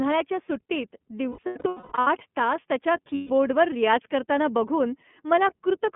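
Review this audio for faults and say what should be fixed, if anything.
The whole clip carries iLBC codec damage, plainly audible. The speech is confined to a telephone band of about 150 Hz to 3.4 kHz, and each 30 ms frame is coded on its own, which fits iLBC's 13.33 kbps mode. This gives a slightly rough, synthetic edge. Unlike a wideband codec at low bitrate, nothing above 3.4 kHz survives at all, and there is no smearing carried from one frame into the next. To prevent it, use a wideband codec such as Opus on this link.

Lost iLBC frames break the speech twice. From 1.29 to 2.07 s, just before "तास त्याच्या", about 600 ms of audio is missing in bursts scattered over 780 ms, the longest lasting around a fifth of a second. From 3.15 to 3.31 s, between "तास त्याच्या" and "रियाज करताना बघून", a single 150 ms gap occurs. In each gap the decoder repeats the last pitch cycle mixed with noise, so you hear a held, buzzy vowel rather than silence or a click. 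This is what separates it from a plain dropout. Because every iLBC frame stands alone, the voice is clean again the moment packets resume, with none of the lingering distortion of codecs that depend on earlier frames. To prevent it, fix the packet loss on the network path or add forward error correction or redundancy.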